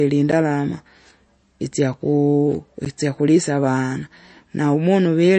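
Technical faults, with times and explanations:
Throughout, MP3 compression: plainly audible codec damage across the speech, likely from a low-bitrate MP3 encode at around 34 kbps. With too few bits, the encoder discards weaker frequency components, and those components drop in and out from one frame to the next, giving a watery, swirling texture and smeared consonant onsets. Nothing remains above about 8.3 kHz, consistent with a fixed lowpass cutoff applied at this bitrate, so sibilants lose their top end.
0.32 s and 2.85 s, block of digital silence: two gaps, each about 10.7 ms long, the second just before "itsakulisa avana". The output falls abruptly to silence and returns with no fade. At this length each gap sounds like a tick or brief dip, not a heard silence. The duration fits a 512-sample buffer that was not filled in time.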